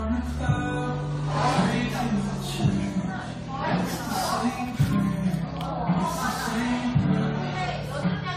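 Throughout, the audio was likely re-encoded about seven times, consistent with AAC-LC near 64 kbit/s. This generation loss leaves swirly, hollow smearing, blurred attacks, and nothing above 16.1 kHz.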